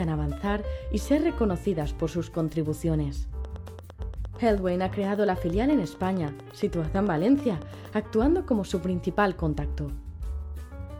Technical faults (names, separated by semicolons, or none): train of clicks